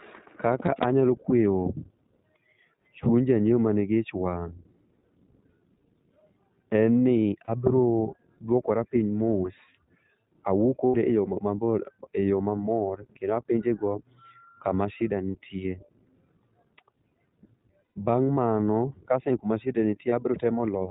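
The iLBC codec shapes the whole clip. The speech is band-limited below 4 kHz and sounds rough and slightly synthetic, which fits the 15.2 kbps, 20 ms frame mode. Each frame's excitation is coded on its own.

Lost iLBC frames cause short dropouts at 0.66–0.69 s, 7.45–7.50 s, 10.86–10.96 s, 12.88–12.91 s just after "e yo", 17.86–17.98 s, and 20.10–20.13 s just after "kaseng'e kama shida". These gaps run from one frame (20 ms) to six frames (120 ms). During each gap the decoder repeats the last pitch cycle mixed with noise, which sounds like a held, buzzy vowel. The longer gaps fade out. The speech recovers almost immediately afterward.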